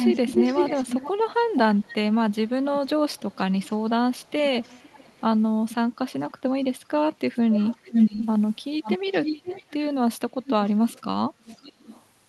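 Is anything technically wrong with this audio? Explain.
Yes. There is an echo leak at 0.0–1.11, 1.43–2.79, 3.14–3.7, 4.16–5.21, 7.33–8.27, 8.82–9.74, 10.45–10.98 and 11.46–12.05 s. A delayed copy of the speech trails it by about 0.48 to 0.54 s. Sometimes the copy is as loud as the speech, and sometimes it is far quieter. The likely cause is a far-end loudspeaker whose echo canceller let its pickup through. The Opus-coded call path is audible in the sound rolling off near 12 kHz.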